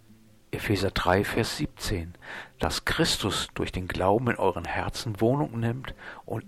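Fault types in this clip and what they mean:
Loud pop, at 1.37–1.39 s, 2.63–2.66 s and 4.65–4.67 s: three separate single pops, each about 20 ms long, rising well above the surrounding sound, roughly 10 dB over it at the first and third and about 15 dB at the second. Each is a brief voltage pulse added to the signal, likely from a switch, plug, static discharge or driver glitch. The audio continues uninterrupted beneath each thump.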